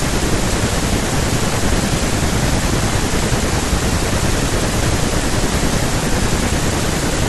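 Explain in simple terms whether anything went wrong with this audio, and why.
Nothing went wrong here: no technical faults turn up anywhere in the recording.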